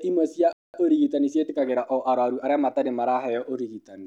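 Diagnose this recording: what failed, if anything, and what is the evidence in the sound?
The speech cuts to silence at 0.53 s and resumes at 0.74 s, a gap of about 0.21 s in mid-flow. This is a playback stall at the playback stage, likely the player's buffer running dry or its thread being blocked, so nothing reached the output until it recovered.

From 0.74 s to 2.84 s the speech runs hurried, about 1.1 times normal speed, yet keeps its natural pitch. This is time-compressed catch-up: after the stall, the player trims its backlog by dropping short slices of audio and cross-fading across the joins.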